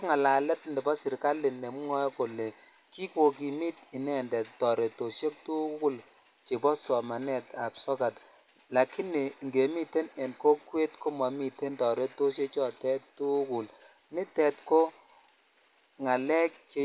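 There are no technical faults to describe anywhere in this speech.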